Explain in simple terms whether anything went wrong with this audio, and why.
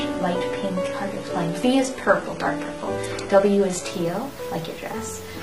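For the first 3.9 seconds or so, the sound is dull and a bit smeared, with no real sparkle on top, and then it suddenly gets clearer without any gap. That's an adaptive stream starting at a low bitrate. The player began with a cheap, low-quality version so playback could start fast. Once it knew the connection could handle more, it jumped to a better version. Before the switch, the crisp high end is missing or faked, and you can hear more compression mush.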